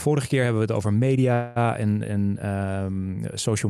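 Right after "hebben we het over", at 1.33 s, the speech stalls and the last bit of sound gets stretched into a fading buzz until about 1.67 s, then picks up again on "en en" with nothing skipped. That's a call audio freeze: packets most likely got held up in transit, the jitter buffer ran dry, and the receiver papered over the wait with roughly 225 ms of filler, so everything after it lands that much later.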